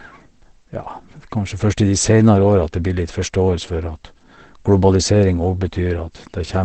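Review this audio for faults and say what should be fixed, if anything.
Throughout, the speech is muffled and hoarse, with nothing above 8.5 kHz, likely from heavy Opus compression falling back to its narrower SILK speech mode, which fits a bitrate near 12 kbps. To prevent this, encode with a substantially higher Opus bitrate so the encoder keeps full bandwidth instead of dropping to SILK.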